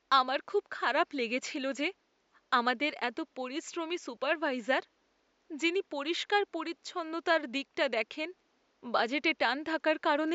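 Nothing stood out on listening to this speech recording, with only faint room noise sitting about 43 dB below the speech.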